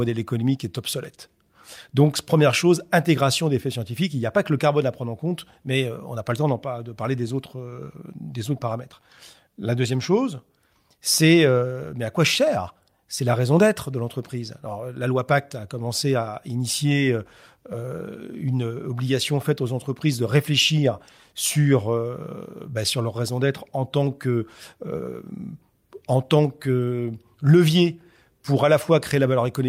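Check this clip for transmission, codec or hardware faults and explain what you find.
Nothing stands out on a listen here, so there's no fault to report for this bit of speech.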